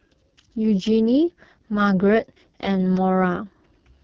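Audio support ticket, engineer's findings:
AMR wideband (HD Voice) codec, heavy damage, whole clip. Speech rough, raspy, buzzy throughout; fits lowest 6.6 kbit/s mode, pulse-excited vocal tract model starved of bits. Top band is hissy shaped noise, not a clean 3.4 kHz cut like narrowband AMR. Damage steady, no dropouts, so not packet loss.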